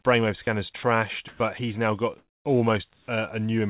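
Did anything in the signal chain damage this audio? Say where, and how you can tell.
Yes. Call processing: speech drops out at 0.44–0.47 s and 0.77–0.83 s, replaced by flat noise, likely sound dropped by the voice detector.

The comfort noise in place of the background is steady and featureless at 1.28–1.4 s, 2.18–2.45 s after "but he's now got", and 2.93–3.08 s. It is likely discontinuous transmission at the sender. The level steps up about 5 dB and 4 dB, then down about 10 dB.

The onset is clipped by the voice detector at 1.38–1.4 s, before "but he's now got", and at 3.05–3.08 s. Each start is abrupt, likely from slow detection of returning speech.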